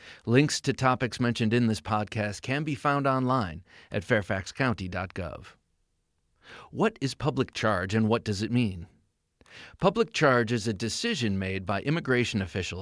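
No technical faults can be heard in the recording.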